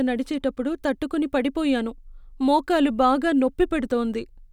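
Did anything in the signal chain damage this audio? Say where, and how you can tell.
No, nothing along the chain from capture to playback has left an audible mark on this speech.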